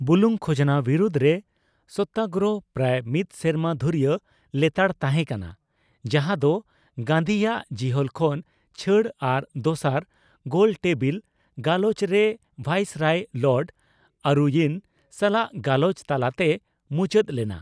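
Across the whole speech recording, the signal stays steady and continuous, with no technical faults to be heard at any point.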